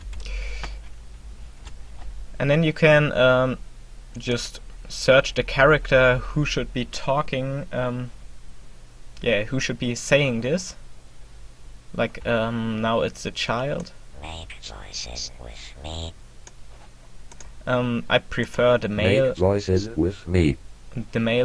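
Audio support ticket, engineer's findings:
Nothing stood out on listening, and no fault is identified for this ticket.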